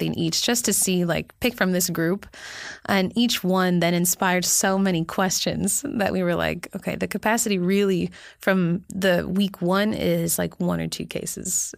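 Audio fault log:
No faults heard in this clip.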